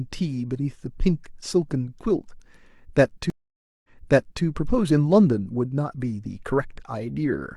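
At 3.3 s the speech cuts out for about 0.54 s, a stream reconnect: the connection dropped, the player went quiet, reconnected and started a new decoder partway through the stream. When sound returns, it picks up about 0.6 s earlier than where it stopped, so a short stretch of speech is heard twice before it catches up near 4.44 s. That repeat marks it as a reconnect with a resent burst rather than a simple dropout, which would resume at the same point or skip ahead.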